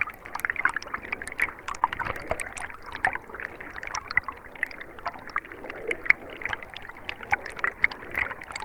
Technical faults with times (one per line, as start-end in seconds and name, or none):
1.79-1.83 short concealed packet loss